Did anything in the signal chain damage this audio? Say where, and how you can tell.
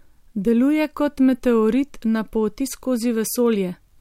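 No, nothing in the signal chain damaged this audio.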